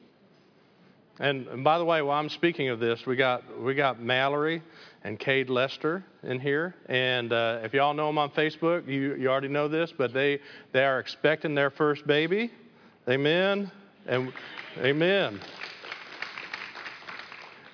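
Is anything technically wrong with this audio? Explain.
No, the signal holds steady throughout, with nothing in it that points to a technical problem.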